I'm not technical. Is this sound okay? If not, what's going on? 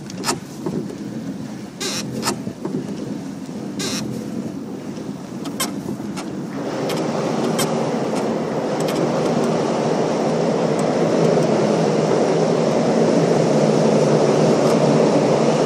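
No. The same audio was likely captured twice, with one copy running late: a doubled audio track. A second, equally loud copy trails about two seconds behind throughout.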